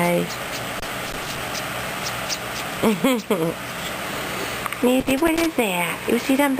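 From about 0.79 to 1.38 s, and again from 5.00 to 5.46 s, there's loose connector crackle: a worn or dirty contact keeps making and breaking, chopping the signal into an irregular burst of scratchy crackle.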